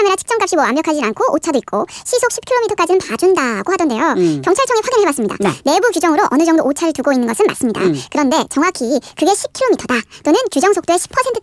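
From start to finish the speech runs fast and high: a wrong sample rate. Everything plays 1.5 times too quickly and sits about seven semitones sharp, which fits audio recorded at 16 kHz being played back at 24 kHz without any conversion.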